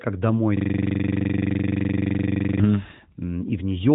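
At 0.57 s the audio locks into a system hang loop. The driver or host stalled while the hardware kept replaying its ring buffer, so one 42.67 ms slice repeats exactly until 2.60 s, about 47 times. The result is a rough buzz at 23.4 Hz, which fits a 2048-sample buffer. On a waveform the identical block tiles end to end. A spectrogram shows vertical striping at that rate and harmonic lines spaced 23.4 Hz apart, all under the narrowband mobile codec's ceiling near 3.8 kHz.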